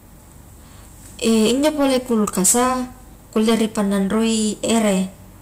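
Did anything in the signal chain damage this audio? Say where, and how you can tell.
Yes. Hard clipping runs through the whole speech recording, most likely from gain set too high ahead of the converter or a fixed-point format stage. The signal is driven about 14 dB past full scale, so a few percent of samples are cut off flat. Every loud syllable sounds harsh and fuzzy. On the waveform, peaks are sheared into level plateaus. A spectrogram shows broadband harmonic smear reaching into the high kHz range on each loud stretch.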